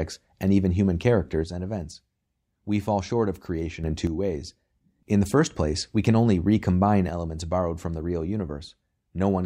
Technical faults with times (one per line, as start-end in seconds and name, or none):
1.44-5.07 one channel drops out
7.09-9.46 one channel drops out